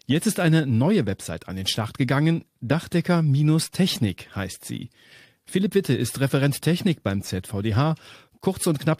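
Nothing stood out on listening to this speech recording.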